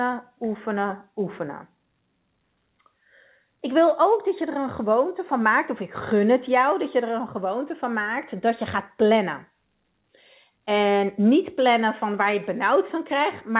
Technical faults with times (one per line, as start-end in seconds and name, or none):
none